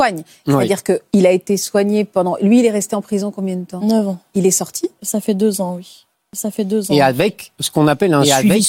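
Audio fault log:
6.33 s to end, doubled audio track: just after "fait deux ans oui", a second full-band copy of the speech abruptly joins and runs under the original, trailing by around one and a half seconds and roughly 5 dB quieter, with no decay or room colour. The likely cause is a slower second capture path or an out-of-step edit. On a spectrogram, the harmonic and formant patterns repeat, shifted later in time. The waveform shows overlapping envelopes that start suddenly rather than building up.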